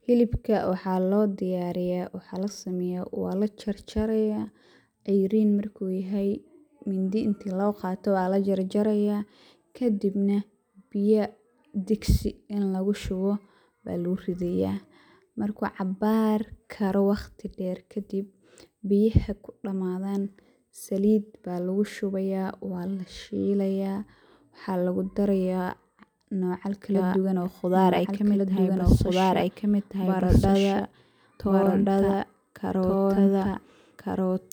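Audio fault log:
26.95 s to end: doubled audio track. From 26.95 s a second full-band copy of the speech enters abruptly and runs to the end of the clip, trailing the original by about a second and a half and at much the same level. The copy carries no decay or added room colour, so it sounds like an identical overlapping pass rather than an echo. The likely cause is the signal being captured again through a slower path and mixed back in.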